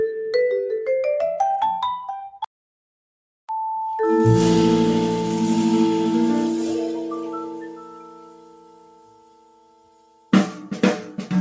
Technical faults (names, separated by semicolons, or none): noise suppressor applied to music or sounds; audio dropout to silence; sound cut by the noise suppressor